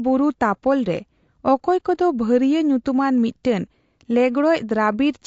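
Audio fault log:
Throughout: low-delay AAC compression. The speech has a rough, grainy texture, with a noisy fill between the pitch harmonics and a thin, somewhat synthetic upper band. The likely cause is AAC-ELD coding at a rate that fits about 32 kbps. Its short analysis frames cannot separate closely spaced harmonics well and spend more bits per second. At this rate the encoder leaves coarse noise between harmonics and reconstructs the highs only approximately.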